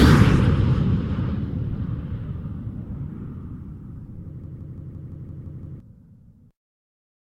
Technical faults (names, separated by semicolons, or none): system hang loop